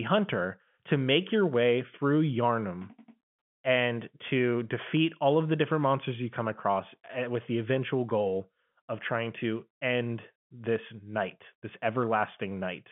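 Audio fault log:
Nothing to log here, just telephone-band speech through standard G.711 mu-law at 64 kbps, with the line passing roughly 150 Hz to 3.4 kHz and nothing audible above about 3.7 kHz.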